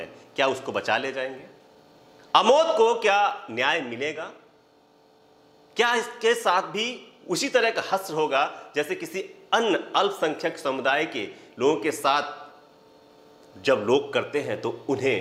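Clock drift between sender and receiver runs through the whole clip: the sender's audio clock is about 5 percent fast, so the receiving jitter buffer keeps overfilling. The receiver must keep discarding material to stay in step, leaving the timing subtly unsteady from start to finish.

Repeated timing corrections run from 0.24 s to 15.07 s, where the receiver trims short pieces at uneven intervals, all in the same direction, to absorb the faster 105 percent incoming rate. The sound carries faint, irregular hiccups and a slightly restless tempo.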